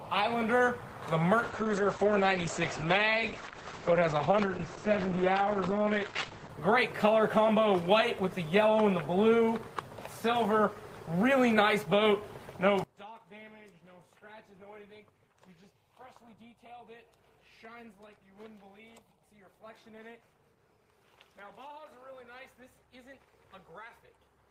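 From 1.4 to 6.57 s a call bitrate drop takes the encoder from 32 to 10 kbps, so the sound turns coarse and watery and loses everything above 8 kHz, unlike simple filtering. From 12.84 s to the end the level falls by about 23 dB, leaving a faint residue, likely one channel inverted cancelling in the mono sum rather than a gain fault.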